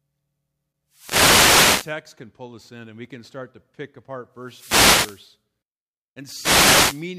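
Bursts of swishing static hit the speech from 0.89 to 2.00 s (ending just before "can pull us in"), 4.39 to 5.35 s (just after "start to pick apart") and 6.26 to 7.10 s. These are wireless microphone noise hits: the FM radio signal faded as reflections cancelled, letting receiver noise rise over the speech.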